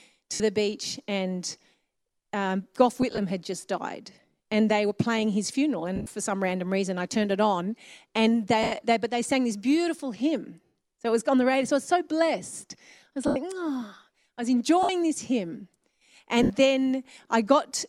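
Lost LE Audio frames break this speech at 0.34 s (just before "the beach and"), 3.02 s (before "had just died and"), 5.96 s, 8.63 s (after "turned it on and"), 10.66 s, 13.27 s, 14.83 s and 16.43 s, each costing 60 to 100 ms. At 3.02 s and 5.96 s the losses come in short scattered runs spread over about 160 ms and 140 ms respectively. The decoder fills each gap by repeating the last spectrum with randomised phase, so the voice turns into a brief hissy smear.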